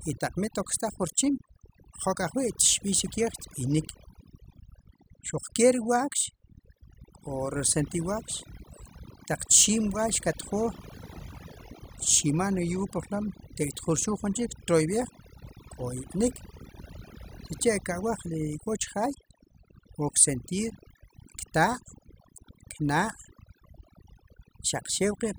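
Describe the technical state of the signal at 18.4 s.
At 18.4 s the speech carries overdone noise removal, which runs through the whole clip. The noise reduction is set too strong. Bands near its noise estimate are pulled far down or cut. Quiet speech detail goes too. The background drops and breaks up into twinkling, warbling specks.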